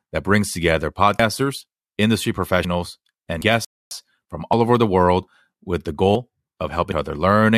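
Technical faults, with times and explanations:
1.20, 2.65, 3.41, 4.53, 6.15 and 6.92 s: dropped buffer (overrun). At each point the speech jumps forward, and no gap is left behind. The likely cause is the capture side failing to read its samples before the hardware overwrote them. That would cut out about a tenth of a second at the first five points and about a third of a second at 6.92 s. In the waveform and spectrogram, each one is a vertical seam where the shapes on either side don't line up.
3.65 to 3.91 s: rebuffering stall. The speech stops dead into silence for about 0.26 s, then picks up exactly where it left off. The player ran out of downloaded audio and waited for more, so nothing is lost, but 0.26 s of dead air is added. The waveform shows a flat line between two clean edges, and the spectrogram shows an empty vertical band across all frequencies.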